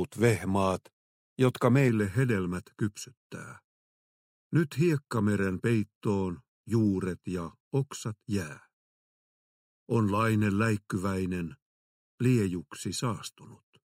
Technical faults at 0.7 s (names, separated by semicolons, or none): none